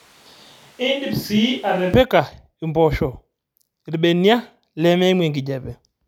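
Right from the start, up to about 1.94 s, the speech sounds roomy and hollow, thin on bass, a bit quieter (around 5 dB down) and with background noise sitting roughly 30 dB under the voice. Then it snaps abruptly to a closer, fuller sound. That's the classic switch to a distant microphone: the close mic's feed was likely missing for that opening stretch, so we're hearing something further off, like a camera mic, until the cut back.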